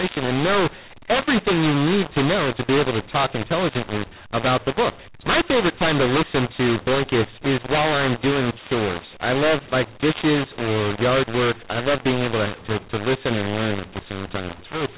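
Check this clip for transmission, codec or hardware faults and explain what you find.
One fault runs through the whole speech clip, on top of telephone-band G.711 coding that cuts everything above 4 kHz.

mu-law and A-law mixed up, throughout: samples encoded with mu-law are decoded as A-law, so each 8-bit code maps to the wrong level. Loudness is scrambled, quiet samples are pushed well above silence, and the speech sounds harsh and distorted while pauses fill with noise.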